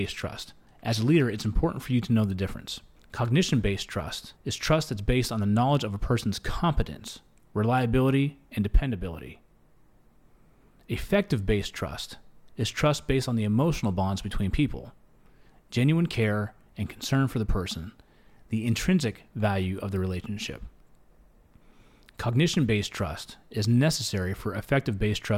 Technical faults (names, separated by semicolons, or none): adaptive stream starting at a low bitrate